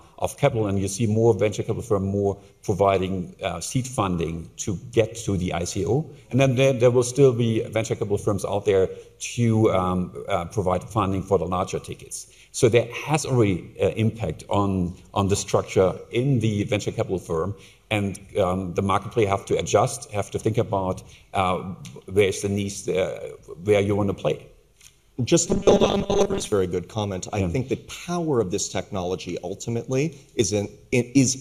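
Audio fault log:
25.47–26.52 s: robotic sound from repeated short buffers. The sound becomes a rigid, metallic buzz fixed at 200 Hz. Roughly 70% of this stretch is repeated 5 ms slices. Fresh audio likely arrived too slowly, so repetition filled the gap.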